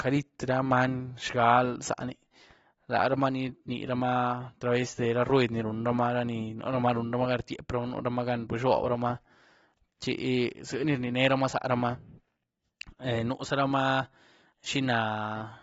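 Throughout the speech, the encoder has likely run AAC compression at a starved setting, consistent with AAC-LC at around 28 kbps. With so few bits per frame, it discards everything above 7.6 kHz and coarsely quantises what remains, leaving gaps in the spectrum. The result is a dull, band-limited sound with plainly audible damage: sibilants turn fizzy and smeared, and sustained sounds take on a watery, warbling texture as the spectral detail shifts from frame to frame.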